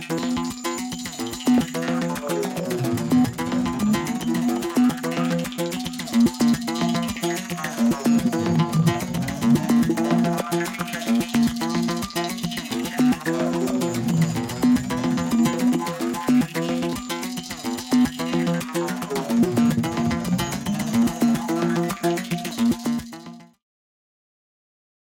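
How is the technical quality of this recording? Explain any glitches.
No glitches or technical faults can be heard in this recording. Near the end, the level eases down in a smooth fade-out that begins around 22 s and finishes at about 23.7 s, with no click or abrupt edge.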